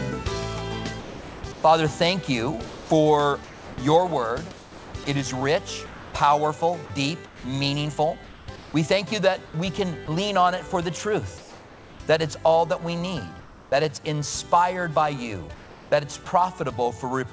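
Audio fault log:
1.00–1.64 s and 2.66–6.14 s, sound chopped by the voice detector: The sender's voice detector likely toggled repeatedly between sending and muting, swapping about 560 ms and then about 1.3 s of quiet sound for comfort noise. The audio turns choppy.
7.26–10.08 s, 11.38–12.00 s, 13.40–13.72 s and 15.54–15.92 s, comfort noise in place of the background: With transmission likely halted during pauses, the receiver filled 700 ms, 620 ms, 320 ms and 380 ms with synthetic noise. The detailed background, sitting about 23 to 26 dB below the loudest sound, becomes a flat hiss roughly 3 dB quieter.
10.06–10.08 s, sound dropped by the voice detector: The detector likely judged a faint tail of sound to be background and stopped sending, so about 10 ms of real audio is lost and 20 ms of steady comfort noise stands in. A brief flat patch replaces the sound before sending resumes.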